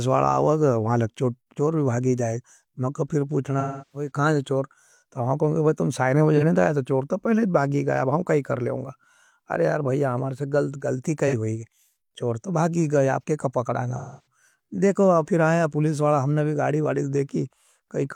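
Speech with AAC frame loss and concealment. Brief smeared, phasey blips occur at 6.37 s and 11.27 s, each about 43 ms. Longer gaps at 3.60 to 4.10 s and 13.97 to 14.26 s decay toward silence, then fade back in, as the decoder stretches the last good spectrum.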